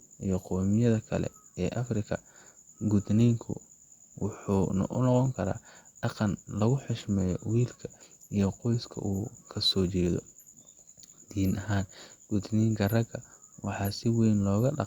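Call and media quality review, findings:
No findings from this call and media quality review: nothing in the speech needs to be raised.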